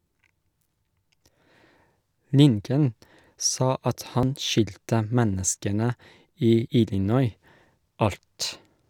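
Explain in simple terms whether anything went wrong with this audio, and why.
Quick skips at 1.78, 4.23 and 6.68 s, where a sliver of speech vanishes. It's most likely audio missing between chunks: the recorder drops a bit every 2.5 s.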